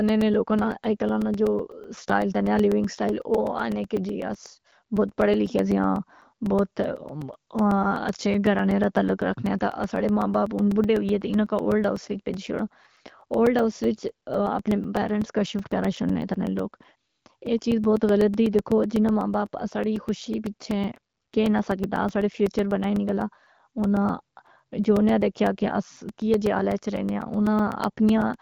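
A steady ticking runs through the speech from 0.09 s to 28.34 s, with a brief gap of roughly 4 ms of silence every 0.125 s, about eight per second. These are periodic USB or driver dropouts: a background task stalls the audio path at a fixed interval, so a sliver of audio is lost each time.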